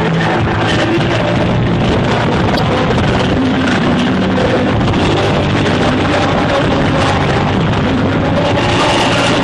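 The whole audio carries plainly audible codec damage, likely MP3 compression: faint detail flickers in and out between frames, giving a watery, swirling texture and smeared attacks that fit a bitrate around 64 kbps. Unlike broadband noise or hiss, it rises and falls with the sound itself. From 2.55 to 2.59 s, damaged data in the compressed stream produces a brief glitch as the decoder loses sync and resynchronises. A plain dropout would instead leave silence or a click.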